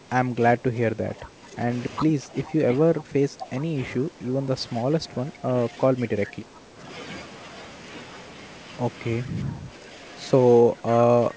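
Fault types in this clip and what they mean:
Speech suppressed in double talk: the speech repeatedly sinks by up to about 10 dB, later about 5 dB, likely because an echo canceller turned the talker down while the far side spoke. Unlike packet loss, it dips in level.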